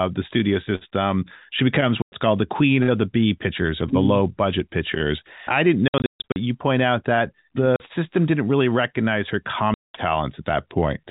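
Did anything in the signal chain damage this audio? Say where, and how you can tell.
Yes, at the network stage: packet loss filled with silence. Dead gaps with hard edges fall at 2.02 to 2.12 s, just before "called the queen of"; 5.88 to 6.36 s, after "budget pictures I didn't", where 320 ms drops out in bursts (longest 140 ms); 7.76 to 7.80 s, before "system didn't really recognize"; and 9.74 to 9.91 s. Gap lengths step in 20 ms units, which fits 20 ms packets replaced by silence rather than concealed. The G.711 telephone band limit is audible throughout.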